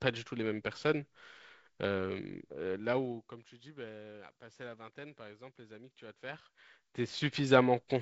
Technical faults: zipper noise

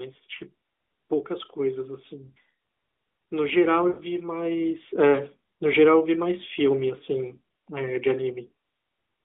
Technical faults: lost AMR speech frames

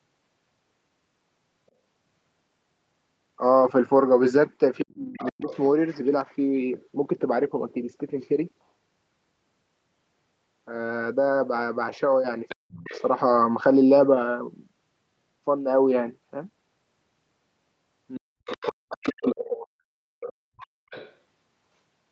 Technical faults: other side's voice leaking through; speech suppressed in double talk

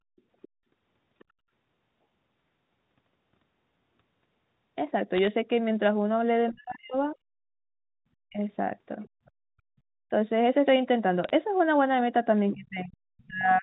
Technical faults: other side's voice leaking through; bit errors on a digital phone line; speech suppressed in double talk

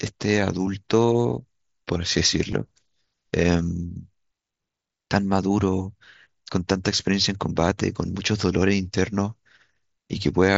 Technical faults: concealed Bluetooth headset packet loss

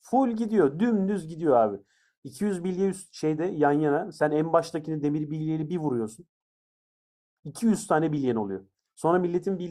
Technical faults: none

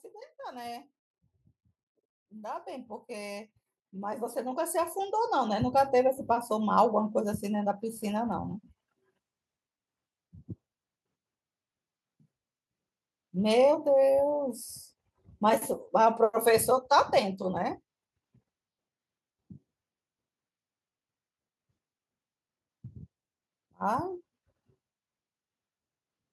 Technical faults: automatic gain rising

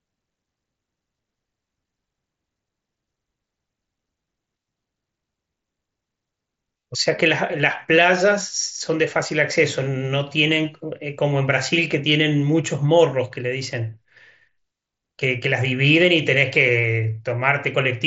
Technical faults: none

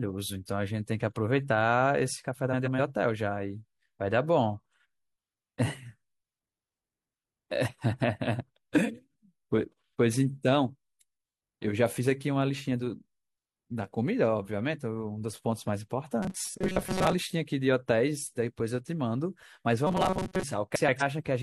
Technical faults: frames out of order; robotic sound from repeated short buffers

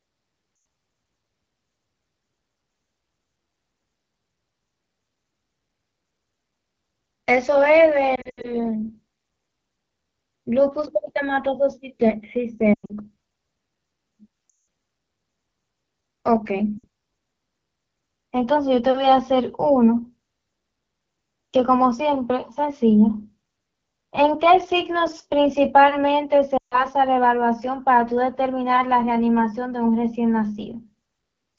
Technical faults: AMR wideband (HD Voice) codec; lost AMR speech frames

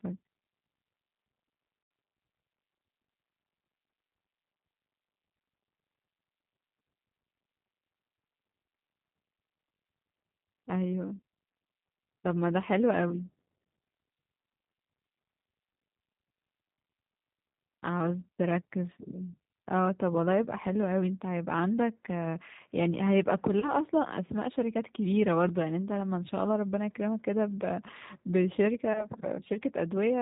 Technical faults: G.729 codec; VoIP packet loss concealed by the speech codec

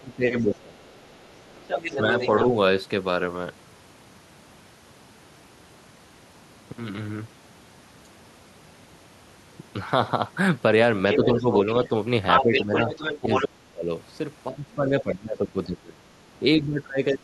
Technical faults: speech suppressed in double talk; other side's voice leaking through

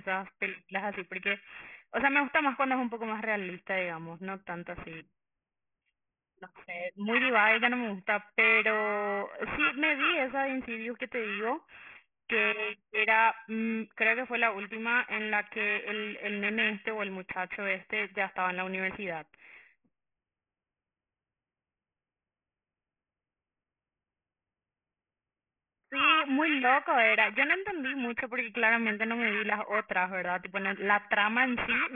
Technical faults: aliasing

